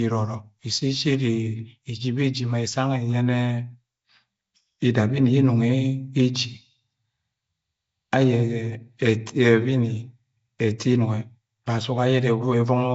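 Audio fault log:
Throughout, Nellymoser compression: the speech carries a rough, hissy halo and a smeared, underwater quality, likely from Flash-era Nellymoser Asao coding at a rate that fits 32 kbps. Weak bands are left empty and filled with noise, showing on a spectrogram as speckled patches, and nothing appears above 7.7 kHz.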